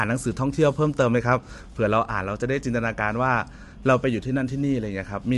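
Throughout, the speech sounds rough and grainy with noise between harmonics and nothing above 11.6 kHz, likely low-delay AAC compression at a rate around 32 kbps, unlike smeary longer-frame codecs.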